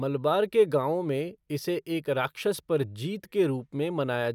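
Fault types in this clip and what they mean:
No fault types are present in this clip.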